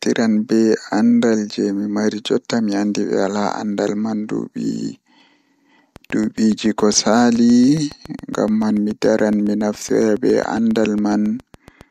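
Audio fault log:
5.96–11.82 s, train of clicks: a regular ticking at about 7.2 clicks per second, around forty in all, peaking near the level of the speech and audible through the pauses. Evenly spaced, similar pulses likely come from electrical interference or a faulty connection or power supply.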